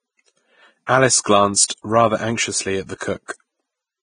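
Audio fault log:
throughout: Vorbis compression. The speech sounds hissy and grainy, and nothing is present above 9.7 kHz. The treble is quantised so coarsely that fine detail is replaced by noise of similar energy, which roughens tones and blurs attacks. The damage is heavy and fits a low bitrate of around 20 kbps, likely from Vorbis. Unlike a plain low-pass filter, the remaining band also carries granular noise rather than just sounding dull.
0.86–0.89 s, 1.68–1.70 s, 2.98–3.01 s, 3.26–3.29 s: pre-echo. A short hiss of 23 to 31 ms comes just before a sharp onset, and the attack itself sounds softened. The second comes just before "rather anxiously at the", and the last two follow that phrase. Quantisation noise sized for the loud attack is spread across the whole transform block, so it also fills the quiet moment before it. Unlike a click, it is a brief smear of noise rather than a single sharp tick.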